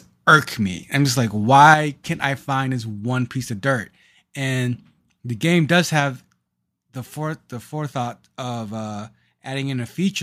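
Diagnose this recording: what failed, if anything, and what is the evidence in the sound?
A microphone overload hits between 1.69 and 1.73 s, at the converter stage. The loudest peak there turns briefly harsh and crackly, with its top flattened. It exceeds full scale by about 1 dB, and only a small fraction of samples are cut. The likely cause is input gain set too high before the analogue-to-digital converter, so the waveform crests simply run out of headroom and clip.

The microphone volume is stepped down twice, in the call-processing stage. At 1.74 s the speech and background both drop by about 6 dB at once, right after the distorted peak. At 6.0 s a second, smaller drop of about 3 dB follows. The likely cause is the call software's automatic gain control finding the microphone too loud or clipping and cutting the device input level in discrete steps.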